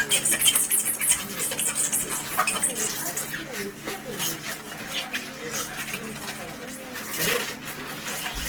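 Throughout, the sound is grainy and rough, with noisy texture replacing clean tones. This is likely Opus compression in music mode, at a rate that fits around 16 kbps.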